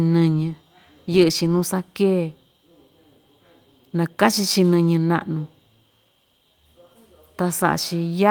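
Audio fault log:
Nothing stood out on listening through the speech.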